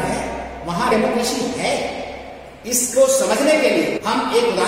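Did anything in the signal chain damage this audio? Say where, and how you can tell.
Yes. In the codec or storage stage, compressed frames were skipped: runs of coded frames, around fifteen each time, never reached playback. The sound jumps ahead about a third of a second at 0.9 s and about 0.4 s at 3.96–3.98 s.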